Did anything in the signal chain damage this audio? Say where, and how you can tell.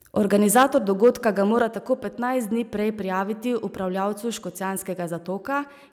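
Yes. Microphone overload at the converter input. From 0.55 to 0.77 s and again from 1.03 to 1.28 s, the loudest speech peaks turn harsh and crackly. Their tops are flattened. The input was likely driven past full scale, by about 6 dB and then about 3 dB.

Microphone volume stepped down, in call processing. At 0.63 s, inside the first distorted stretch, speech and background drop abruptly by about 4 dB. At 1.62 s they drop by about 5 dB more. The call software likely cut the device's input gain in single steps.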